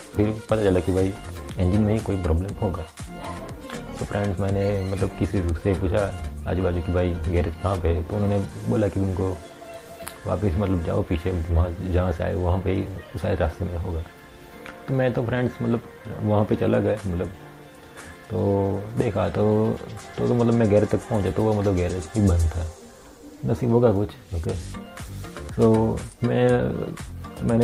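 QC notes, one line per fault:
No faults found in the audio. Nothing needs flagging for QC.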